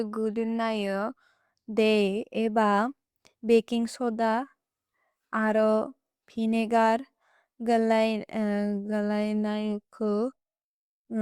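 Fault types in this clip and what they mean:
No technical faults can be heard in this speech recording. There is nothing here to list under any fault type.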